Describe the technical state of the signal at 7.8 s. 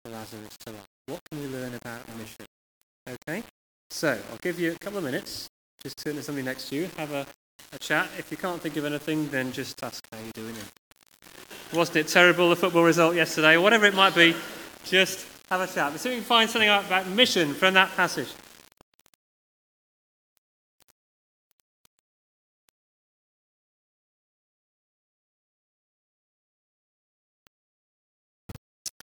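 At 7.8 s the sound is grainy and gritty, a rough distortion that rises and falls with the signal, and it runs through the whole clip. It is likely low bit depth without dither: samples rounded to about 7 bits leave error roughly 25 dB below the signal.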